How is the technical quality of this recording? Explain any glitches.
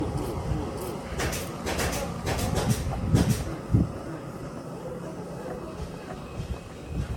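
The technical quality is poor: two faults run through the whole recording.

A doubled audio track is present from start to finish. Every event returns roughly 0.7 s later at about the same loudness, a full-bandwidth repeat with no decay or room colour, so it sounds like a second identical layer rather than an echo. The likely cause is the same audio captured a second time through a slower path, or an edit that left two copies out of step.

Generation loss is also present throughout. The sound is swirly, smeared and hollow, transients have lost their edge, and nothing is present above 17 kHz. The degradation is heavier than one moderate-rate AAC pass would produce, which points to repeated passes of about 96 kbit/s AAC-LC. The likely cause is repeated decoding and re-encoding, perhaps half a dozen passes or more, each requantising on a shifted frame grid so that noise and spectral holes build up.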